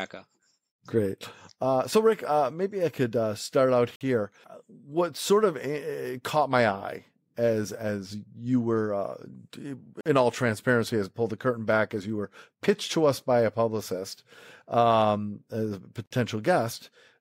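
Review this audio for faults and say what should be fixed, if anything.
Hard-edged 50 ms silences interrupt the speech at 3.96, 10.01 and 16.06 s. This is a gap between chunks, with silence inserted between consecutive 6 s chunks. To fix it, trim any codec padding and have the player schedule each chunk to begin exactly where the previous one ends.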